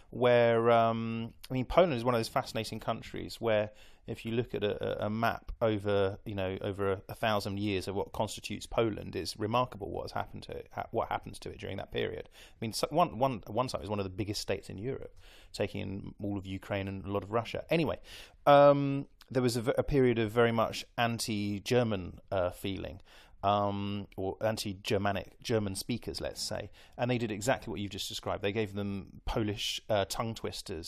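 No technical faults are audible anywhere in this speech recording.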